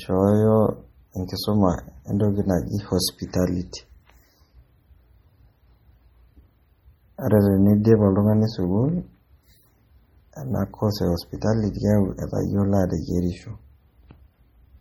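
Heavy MP3 compression damage runs through the whole speech clip. The treble is cut off. Weak frequency detail flickers in and out between frames, giving a watery, swirly texture. S sounds chirp metallically and onsets smear. The likely cause is a very low bitrate, around 32 kbps.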